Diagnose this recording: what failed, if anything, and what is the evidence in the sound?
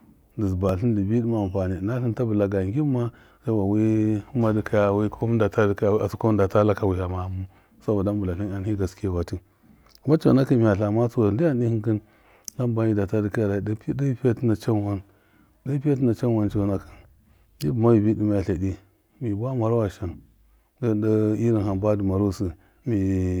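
At the driver or buffer stage, the speech has two skips, at 0.69 s, just before "dɨ bi", and at 6.21 s. Each is a sudden jump with no gap, most likely a dropped buffer (overrun): samples were not read in time and were overwritten, so a few milliseconds vanished and the two sides were joined. On a waveform there is a step discontinuity, and on a spectrogram a thin full-height vertical line.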